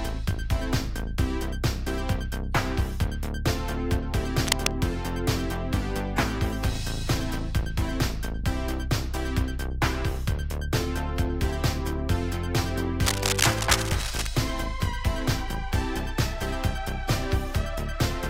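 Two bursts of cable scratch noise, at 4.46 to 4.73 s and 13.01 to 14.29 s, sit about as loud as the audio itself, a dense, uneven rustle rather than isolated clicks or steady hiss, likely from a worn connector or cable being moved.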